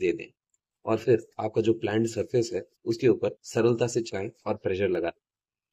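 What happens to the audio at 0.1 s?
Nothing goes wrong at 0.1 s; the audio passes through that moment intact, with no dropout, glitch or distortion to be heard.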